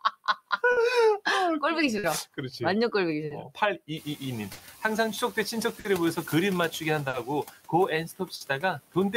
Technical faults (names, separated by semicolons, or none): noise suppressor artifacts; clock drift between sender and receiver; short stall from a late packet; speech cut by the noise suppressor